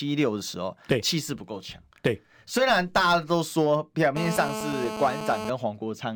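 From 4.17 s to 5.50 s a GSM phone buzz sits under the speech: a nearby 2G handset on a call bursts at 217 Hz, and the audio circuitry rectifies those pulses into a steady, raspy, harmonic-rich buzz about 7 dB below the signal.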